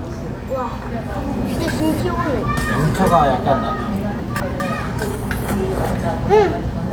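Between 1.6 and 2.0 s, and again between 4.2 and 4.6 s, the sound jumps briefly out of sequence, a scrambled moment rather than a gap. Both are chunks out of order. In each span a 200 ms chunk arrived one chunk late, so it plays after the chunk that should follow it. Nothing is missing, but the swap creates three abrupt joins per event.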